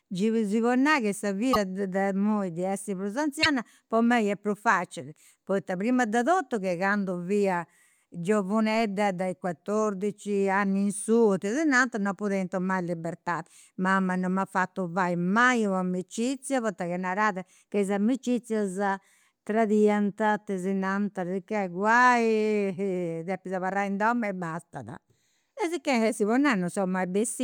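A brief glitch with a jump forward in the speech occurs from 1.53 to 1.57 s, and again from 3.42 to 3.46 s. Each lasts about 40 ms. The likely cause is a broken MP3 bit reservoir. Frames appear to have been dropped, so the frames that followed reached back for borrowed data and decoded bytes belonging to other frames. That garbles the first moments after each gap, a span that fits 24 ms frames.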